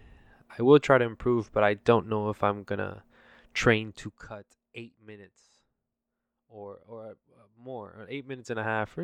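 Zipper noise runs from 3.72 to 4.54 s as the level falls by around 20 dB, and from 7.66 s to the end as it climbs back. The gain jumps in unsmoothed steps, some fifty a second, each clicking, so a fast ticking rides on the speech.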